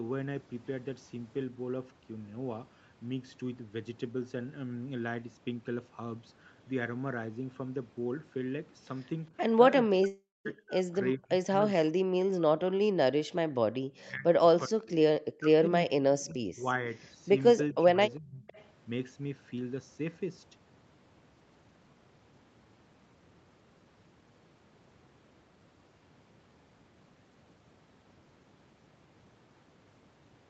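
From 9.82 to 13.60 s the speech is repeatedly pulled down by as much as about 40 dB, for roughly three seconds in all. This is speech suppressed in double talk, likely from an echo canceller ducking the near talker while the far side speaks. Unlike a dropout, the speech is turned down rather than lost.

Inside that stretch, from 10.07 to 10.47 s, a long network dropout occurs, likely from lost packets. A fading buzzy fill is followed by about 0.22 s of silence, and the sound resumes with material missing rather than merely quieter.

The same ducking returns from 13.97 to 14.84 s and from 15.32 to 16.66 s, each dipping by about 40 dB, and again from 17.72 to 18.47 s, at about 30 dB.

From 18.15 to 18.67 s there is an echo leak, likely from incomplete echo cancellation. A faint copy of the sound trails about 400 ms behind and about 30 dB down, distinct as a late repeat rather than a loss.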